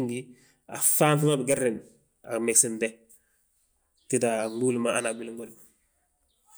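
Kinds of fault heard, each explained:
No technical faults are audible anywhere in the speech recording.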